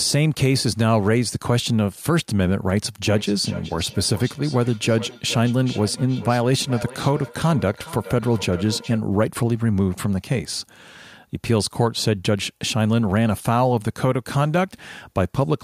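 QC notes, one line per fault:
3.09–9.06 s, feedback echo between two devices: the speech returns at a fixed interval of roughly 0.4 s, peaking at about 16 dB below the direct speech, thinner and more ringing than the original. A second device in the room is replaying this microphone's signal, which is picked up again, and neither device's echo canceller removes the other's playback. The steady repeat spacing and the thin, ringing timbre set it apart from room reverberation, which smears sound continuously rather than in distinct delayed copies.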